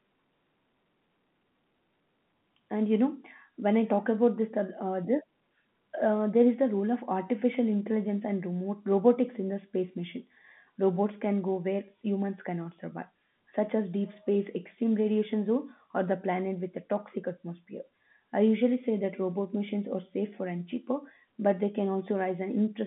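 No technical faults can be heard in this speech.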